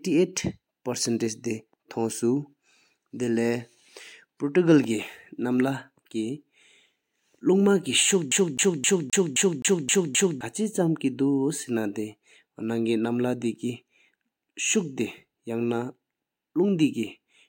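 At 8.31 s the player gets stuck on one turn of the disc, as if a scratch kept throwing the laser back a track. Until 10.41 s the same 0.26 s of speech repeats eight times, each jump marked by a brief mute, giving a fast, even CD stutter.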